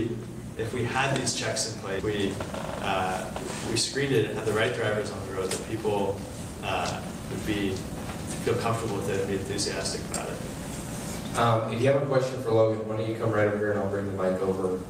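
At 1.99 s a skip ahead dropped about 0.4 s of queued audio, and playback jumps straight across the cut with no gap. From 5.75 to 6.51 s, a jitter buffer speed-up trims short pitch-period slices, around 50 ms in all, so the sound runs 5% faster without any change in pitch.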